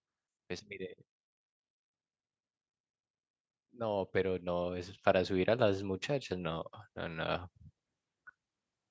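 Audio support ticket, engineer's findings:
Automatic gain rising, 3.71–7.42 s: speech and background swell together about 10 dB. AGC read input as too quiet, ramped gain up gradually. Call mic processing in path: content stops near 8 kHz, lowest bass high-passed.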